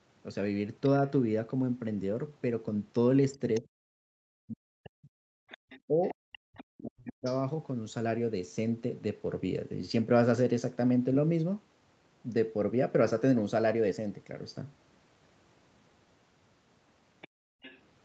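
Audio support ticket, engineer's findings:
Other side's voice leaking through at 3.35–3.6 s, 5.5–7.42 s, 17.21–17.28 s and 17.62–17.79 s. A second voice sits about 20 dB under the talker, and about 25 dB under near 17 s. Likely residual loudspeaker echo the canceller failed to remove. Distinct from crosstalk: it clusters around the canceller's activity.

Speech suppressed in double talk at 3.6–5.08 s and 5.87–7.27 s. The talker's level dips by roughly 40 dB, about one and a half seconds affected in the first span and about one second in the second, while the far side plays on the loudspeaker. Likely the canceller attenuating both sides during overlap. Unlike gating, the talker's own voice drops, not just the room tone.

Background gated by the echo canceller at 5.36–5.59 s, room sound down about 36 dB for roughly 150 ms, and at 17.28–17.62 s, down about 30 dB for roughly 300 ms. Suppressor clamps the mic during loudspeaker playback, then releases. 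The room tone drops out and recovers, which separates it from double-talk suppression. The call-path high-pass and the band ending at 8 kHz are expected.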